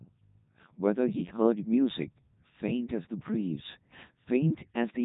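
From start to finish, the speech has passed through the Codec 2 vocoder, and the damage is heavy. Nothing survives above 3.8 kHz. The codec keeps only pitch, voicing, loudness and a rough spectral shape, then rebuilds the voice from sine waves. The original waveform is gone. The result sounds robotic and buzzy. The degree of smearing fits the top 3.2 kbit/s mode.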